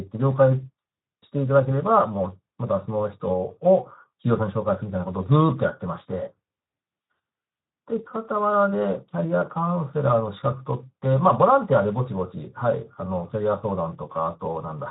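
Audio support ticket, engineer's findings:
Speex codec artefacts, whole clip. Speech noisy and hoarse throughout, plainly audible. Probable component: Speex encoder in the VoIP path, low quality setting, consistent with about 11 kbps. Too few bits for the CELP excitation, so the voice's fine structure is replaced by coarse, noise-like approximation.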